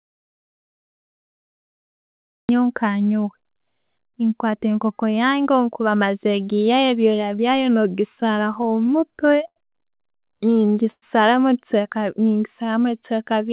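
Speech here, carried over a narrowband call path where nothing reaches above 4 kHz, consistent with a 64 kbps G.711 mu-law link. The trouble starts right away: it opens on a dead-flat audio dropout to silence that's already running when the file begins and lasts until 2.49 s. There's no room tone at all, so the input was likely lost (a dropped device, a failed link or a mute) while the recorder kept writing, and whatever came in during that stretch is gone for good. Then from 8.1 to 9.58 s you get repeated stalls, a proper stutter: thirteen little hiccups where the jitter buffer ran dry because packets were arriving late. Each time, the receiver stretched the last bit of sound to cover the wait, the longest about 81 ms and roughly 191 ms in total, which is about 13% of that span. Nothing is actually missing, but the delivery drags and catches. Right after, from 10.18 to 10.84 s, there's a jitter buffer slow-down. 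The receiver padded in about 53 ms by repeating single pitch cycles to rebuild its reserve, so that bit plays at roughly 93% speed with the pitch unchanged and sounds slightly drawn out. Finally, a short call audio freeze runs from 10.91 to 11.04 s. The last sound is held for about 110 ms and drops to silence for the final 50 ms or so, then the speech carries on where it stopped. That pattern points to packets held up in transit, with the playout delay stepping up by about 110 ms and no content lost.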